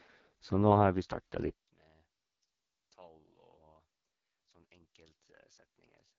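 From the start, the speech carries the sound of the AMR wideband (HD Voice) codec at a very low rate, consistent with 6.6 kbit/s. The codec models the voice with pulses through a vocal tract filter, and at this rate that model is strained. The result is rough and raspy, with heavy coding damage throughout. Nothing is heard above about 7.3 kHz. The top band sounds like shaped noise rather than detail.

At 1.5 s the level falls by about 28 dB and stays down to the end. What remains is a faint copy of the speech. The likely cause is one channel inverted. With one stereo channel in reversed polarity, everything shared between the channels cancels when they are summed to mono. The centred voice nearly vanishes, leaving only the small difference between the channels.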